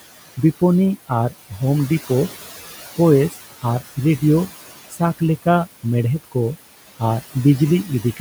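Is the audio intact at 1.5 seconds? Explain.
No. At 1.5 seconds the speech carries noise suppressor artifacts, which run through the whole clip. The suppressor cuts bands it judges to be steady noise by about 15 dB, frame by frame, so the room noise, itself about 17 dB below the speech, dips in the gaps and swells back under the voice. On a spectrogram the noise floor looks patchy and flickering, dark between syllables and filled in beneath them.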